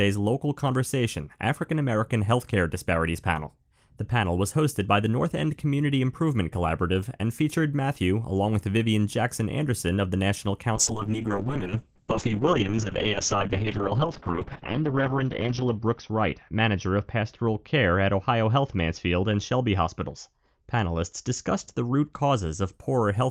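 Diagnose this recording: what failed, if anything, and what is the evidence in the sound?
A call bitrate drop hits the network and codec stage from 10.76 s to 22.79 s. The speech loses its top end as the bandwidth falls from 20 kHz to 6 kHz. Sibilants turn dull and the sound grows rough and watery. The coarsest stretch lasts about 4.1 s. The falling bandwidth estimate forced the encoder to spend far fewer bits. The sound points to a slide from around 32 kbps to 6 kbps.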